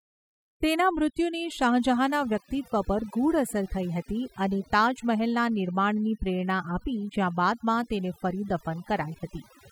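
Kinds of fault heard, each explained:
Overdone noise removal, throughout: a noise reduction stage was pushed far too hard on this speech, so any frequency band whose level sits close to the estimated noise floor gets pulled down sharply or gated out entirely. The softer parts of the speech fall under that threshold and vanish along with the noise, leaving pauses nearly silent but speckled with brief chirping fragments.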